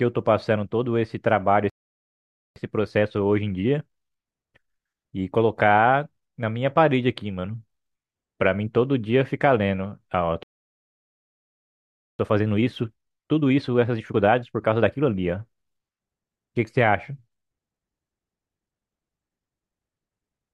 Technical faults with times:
1.70-2.56 playback stall
2.56-5.56 time-compressed catch-up
10.43-12.19 playback stall
12.19-15.19 time-compressed catch-up

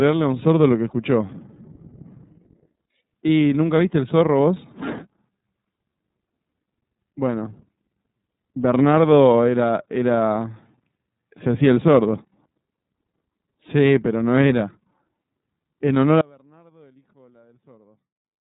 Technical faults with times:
0.00-18.55 iLBC codec
16.21-18.55 audio dropout to a faint residue

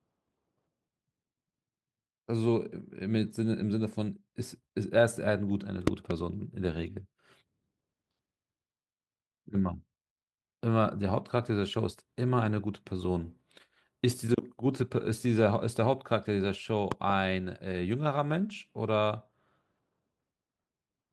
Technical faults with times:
4.01-4.03 lost packet rebuilt from error correction
5.87-6.13 loud pop
12.39-12.45 lost packet rebuilt from error correction
13.31-13.33 lost packet rebuilt from error correction
16.43 lost packet rebuilt from error correction
16.92-17.12 loud pop
18.49-18.55 lost packet rebuilt from error correction

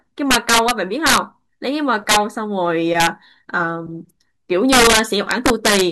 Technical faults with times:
0.31-0.71 integer overflow
1.06-1.18 integer overflow
2.09-2.16 integer overflow
3.00-3.07 integer overflow
4.73-5.81 integer overflow

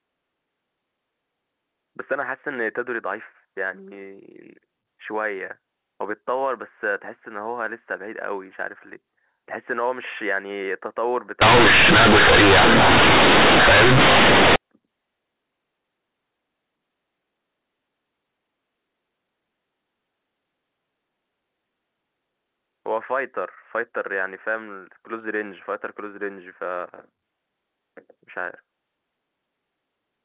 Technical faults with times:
11.42-14.56 companded audio read as linear

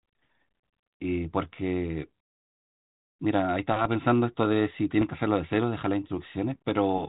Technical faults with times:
5.01-5.03 bit errors on an ADPCM link

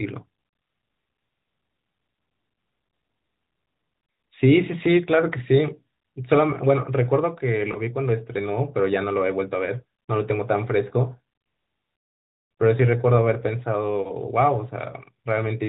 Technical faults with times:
7.72-7.81 lost AMR speech frames
14.02-14.11 lost AMR speech frames

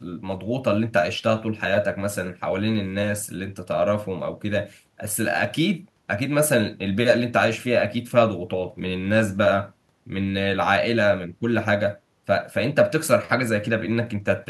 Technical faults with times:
none

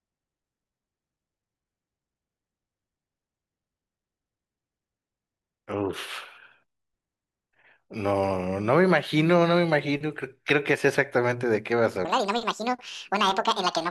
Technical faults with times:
12.05-13.90 section at the wrong speed

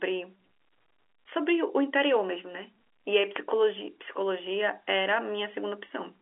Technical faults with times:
none

